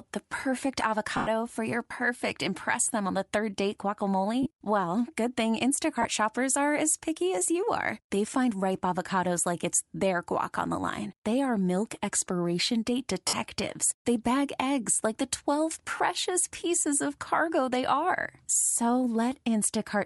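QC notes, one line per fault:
Throughout: Bluetooth LC3 compression, likely at around 48 kbps with 10 ms frames. The top of the speech spectrum gets thinned out and patched with noise, so the voice has a plainly audible breathy, grainy edge.
1.17–1.27 s, 4.43–4.47 s, 6.02–6.05 s, 13.28–13.33 s, 15.98–16.00 s: lost LE Audio frames. The decoder re-used the last spectrum with scrambled phase, so each gap is filled by a noisy smear of the last sound. The longest one, 100 ms between "the perfect" and "for your perfect impress", also starts to fade. Others fall after "are milk expiration date" and just before "pieces of cargo they".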